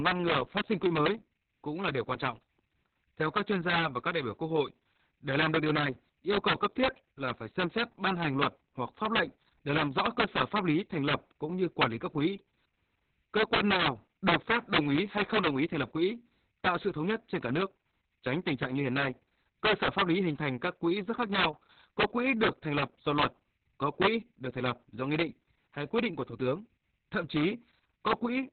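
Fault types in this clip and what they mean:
Integer overflow: peaks driven about 8 dB past the integer limit wrap to the opposite sign instead of clipping, giving violent cracks on peaks, with roughly one percent of samples over the limit.
Opus voice compression: speech coded with SILK at a very low bitrate, narrowband with nothing above about 4.3 kHz, sounds heavily muffled, hoarse and slightly robotic throughout.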